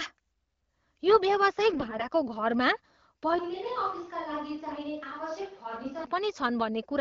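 From 1.70 to 2.05 s, AMR bit errors corrupt the speech. A burst of flipped bits, a fairly high error rate of several percent, which fits roughly seventeen damaged codec frames, misplaces the excitation pulses and skews the fine pitch, gain and spectral values. Pitch and loudness hold roughly steady, but the voice turns hoarse and gargly. On a spectrogram the harmonics smear into ragged, noisy bands.

Between 3.39 and 6.04 s the sound abruptly becomes hollow and roomy, dropping about 10 dB with thinner bass and background noise only about 25 dB below the speech, likely from a switch to a distant microphone. The waveform shrinks suddenly and the spectrogram shows a raised noise floor with little energy at the bottom.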